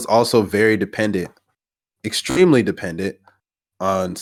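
At 2.30 to 2.40 s, a Bluetooth stutter. Late packets made the receiver replay its last buffer, a buzzing repeat. About 61 ms went missing, which points to several lost frames.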